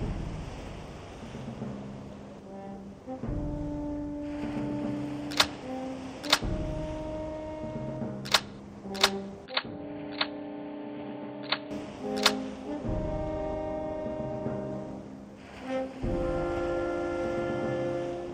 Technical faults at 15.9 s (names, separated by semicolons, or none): none